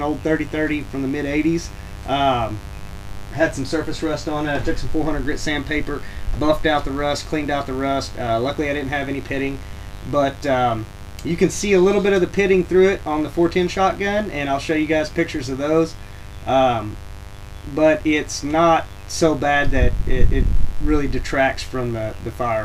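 Throughout, a mains buzz runs under the sound: switching spikes at twice the 50 Hz supply rate add raspy harmonics, sitting roughly 20 dB below the signal.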